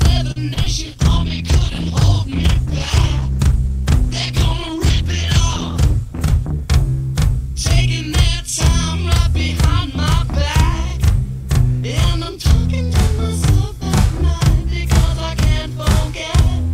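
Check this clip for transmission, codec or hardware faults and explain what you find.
Yes, there are four kinds of fault: a constant channel doubling, a short stall from a late packet, two short concealed packet losses, and a long call bitrate drop.

The channel delay (doubling) runs the whole way through. One channel arrives 40 ms behind the other, and when the two are summed to mono the late copy stands apart as a second image at equal level. Every onset is followed by a close, same-strength repeat, so the audio has a doubled, slapped quality, like a tight single echo sitting right behind it.

The short stall from a late packet falls at 0.31 to 0.38 s. A packet failed to arrive on schedule, the jitter buffer emptied, and the receiver held the last bit of sound for about 45 ms until the data turned up. Playback then resumed from the same point, so nothing is lost, but the sound hangs unnaturally long with a faint buzzy or dipped character, and everything after it sits 45 ms later.

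Short concealed packet loss occurs twice, at 0.54 to 0.58 s and at 0.64 to 0.68 s. Each time, about 20 ms of the stream never reached the decoder. The receiver covered the gap by extending what it last had, about 23 ms and then 17 ms of synthesised fill, before blending back into real audio. Each gap comes through as a quick smear or wobble.

The call bitrate drop starts at 0.88 s and lasts until 6.68 s. The call's bandwidth estimate collapsed, and the encoder was cut from 128 kbps to 13 kbps, staying at that floor for nearly 6 seconds. At that rate Opus codes much more coarsely and discards the upper frequencies, so this stretch turns muffled, rough and watery. Clarity and brightness return once the bitrate recovers at 6.68 s.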